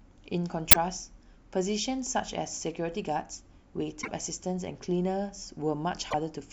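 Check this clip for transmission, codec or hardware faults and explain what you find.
The clip has damaged data in a compressed stream, at three points: 0.70 to 0.76 s, 3.99 to 4.08 s, and 6.11 to 6.14 s. In each spot, part of the encoded speech stream arrived corrupted, so the decoder misread those frames, lost its place and had to hunt for the next valid frame header. Each event is a chirp, squawk, click or short hole replacing the speech for a few hundredths of a second, the longest being the one near 4 s.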